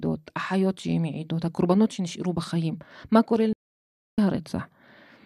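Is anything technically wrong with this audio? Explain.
Yes, there is a digital broadcast dropout from 3.53 to 4.18 s. The receiver stopped getting valid frames and muted, so the speech fades out within about 3 ms and leaves a 0.65 s hole whose content is lost.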